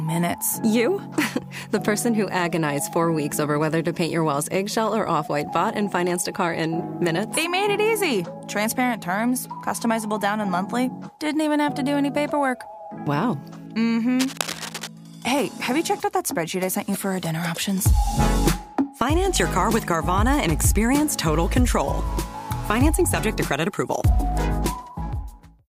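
From 14.19 s to 14.87 s, a burst of cable scratch noise sits over the sound for roughly two-thirds of a second. It is a dense, irregular crackle and rustle, loud enough to be plain against the programme, at around 10 dB below it. The likely cause is a worn cable, connector or control being moved, so that its contact resistance fluctuates rapidly and injects uneven noise into the signal path until the contact settles.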